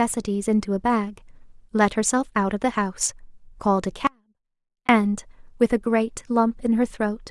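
At 4.07 s the speech cuts out abruptly and stays lost until 4.89 s, an audio dropout to a faint residue lasting about 0.82 s. The gap is not silent: a faint sound remains, roughly 35 dB below the signal's normal level. The likely cause is a brief loss of the wanted feed while the downstream path stayed live, so the sound drops and returns mid-flow with hard edges rather than a pause or fade.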